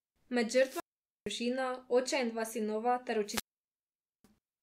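At 0.55 s and again at 3.24 s, just after "in dva sinova ter", the speech suffers a wireless microphone squelch dropout: the radio link weakens, hiss swells briefly, then the receiver's squelch shuts the output for about 0.47 s and then 0.85 s before the voice returns. That rising static ahead of each hole is what separates it from a digital dropout, which cuts to silence abruptly with no noise warning.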